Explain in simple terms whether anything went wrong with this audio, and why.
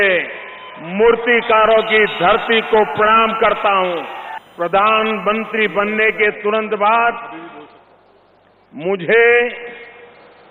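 USB whine runs from about 1.50 to 6.21 seconds: a faint, steady 1 kHz whistle under the sound. A USB connection draws power in regular bursts a thousand times a second, and that rhythm leaked into the audio through the power or ground wiring.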